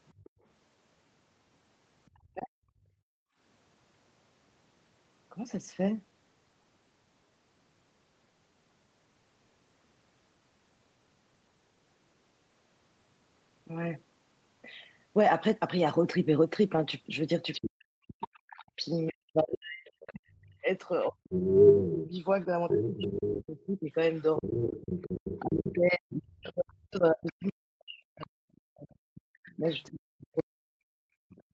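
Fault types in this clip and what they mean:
Other side's voice leaking through: A second voice sits faintly under the talker at 0.08 to 0.3 s, at about 30 dB down. It becomes nearly as loud as the talker, about 5 dB below, from 17.53 to 25.74 s, then returns at about 25 dB down from 27.26 to 31.43 s. The likely cause is loudspeaker sound the echo canceller failed to remove.
Background gated by the echo canceller: The room sound itself drops away, by about 37 dB, at 0.23 to 0.44 s for roughly 150 ms and at 2.83 to 3.39 s for about half a second. A third drop of about 36 dB comes at 31.01 to 31.29 s, near 300 ms. The background then snaps back. This is the canceller clamping the microphone while the loudspeaker plays. Unlike double-talk suppression, the ambience vanishes rather than the talker's voice being eaten.
Speech suppressed in double talk: The talker's own voice is cut, by as much as around 40 dB, while the far side plays on the loudspeaker at the same time. 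This happens briefly at 2.13 to 2.55 s, under half a second. It happens again from 17.61 s to the end, overlapping the strongest leakage. The likely cause is the canceller failing to separate its own talker from the echo and turning both down. The voice itself is turned down, which is what separates it from background gating.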